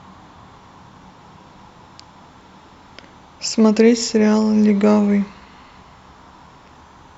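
No technical faults can be heard anywhere in this speech recording, so the signal stays steady and intact throughout.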